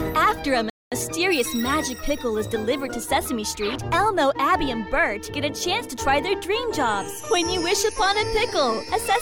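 A Bluetooth stall hits the audio at 0.70 s: the sound drops abruptly to silence for about 0.22 s and resumes at 0.92 s. The likely cause is radio interference on the wireless link delaying packets, so the headphones' receive buffer emptied and playback had nothing to render until retransmitted packets got through. The gap is a hard cut to dead silence, not a fade or a burst of noise, which fits a buffer running dry.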